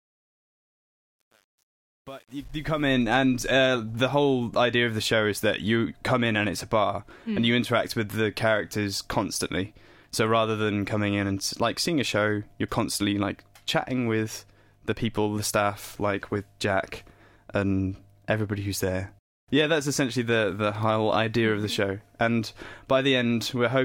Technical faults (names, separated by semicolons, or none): truncation distortion on a fade